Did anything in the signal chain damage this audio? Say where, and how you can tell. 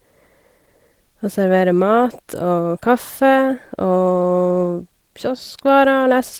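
No, nothing in the signal chain damaged this speech. The Opus voice compression in the path is doing its job, keeping the full band up to about 20.2 kHz with only a light coding texture, which fits its hybrid mode at a moderate bitrate of around 20 kbps.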